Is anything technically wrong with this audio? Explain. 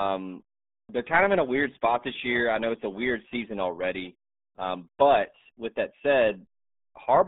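Yes. Throughout, the speech carries RealAudio 14.4 codec damage: an 8 kbit/s dial-up coder leaves nothing above 3.7 kHz, sounding muffled and gargly, with a spectrogram sharply cut off there.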